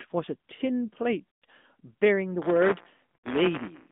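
Throughout the speech, the AMR narrowband mobile codec confines the sound to roughly 200 Hz to 3.6 kHz and adds a plainly audible buzzy, synthetic edge, consistent with a mid AMR-NB rate near 10 kbps. That synthetic texture, rather than plain dullness, distinguishes it from a simple low-pass filter.

From 1.31 to 1.45 s, lost AMR speech frames cause the decoder to stretch the last good sound and fade it over roughly 120 ms, which fits six 20 ms frames. A second run from 3.16 to 3.28 s does the same over about 80 ms. Both end with a weak, rough return. A smeared fade like this, rather than a hard silent gap, separates concealment from a plain dropout.

From 2.42 s to the end, buffer tearing adds a steady robotic rattle at 172 Hz, which fits a 256-sample buffer. Within each period, roughly a twentieth of the buffer repeats audio from about ten milliseconds earlier, with hard joins on both sides. 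Unlike the brief frame-loss fades, it persists at a fixed rate whenever sound is present.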